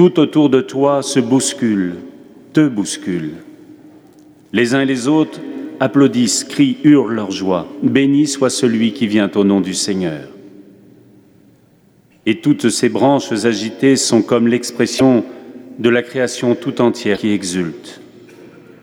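Brief glitches at 14.96 to 15.01 s and 17.13 to 17.18 s come from damaged data in the compressed stream, where the decoder lost sync on corrupted frames.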